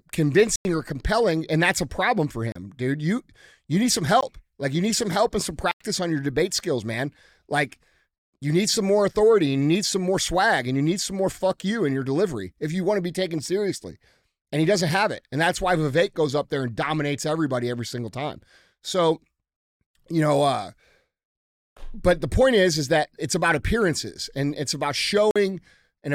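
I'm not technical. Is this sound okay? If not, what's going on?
No. The speech briefly cuts out five times: 0.56 to 0.65 s, 2.52 to 2.55 s, 4.21 s, 5.71 to 5.81 s, and 25.31 to 25.36 s. Each is a block of digital silence. The program sent nothing for a moment, so the sound stops dead.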